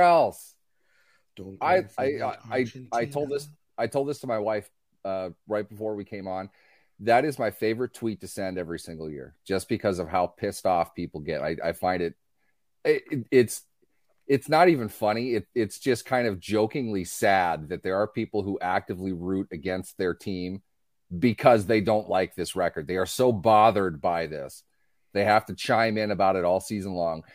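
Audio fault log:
No faults heard in this clip.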